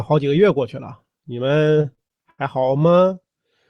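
From 1.81 s to 3.17 s the speech hits repeated stalls (stutter): the jitter buffer keeps running dry, and the receiver stretches the last sound to cover about eighteen short waits, the longest 79 ms, roughly a quarter of that stretch. Nothing is lost, but delivery drags and hiccups. On a waveform the stalls appear as smeared, fading repeats, and a spectrogram shows frozen, blurred harmonic bands, all under a ceiling near 12 kHz from the call codec.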